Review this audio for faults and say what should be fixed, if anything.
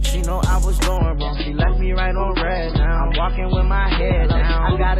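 At 0.97 s the sound drops abruptly to an adaptive stream at a lower bitrate and stays there to the end, with no gap at the switch. Everything above 5 kHz vanishes, leaving a dull, swirly texture with warbling codec artefacts, which fits a fall from roughly 128 to 16 kbit/s MP3. On a spectrogram the upper band cuts off sharply at 5 kHz from 0.97 s onward, while the waveform shows no break. To prevent it, buffer more ahead or cap how far the player may step down when throughput dips.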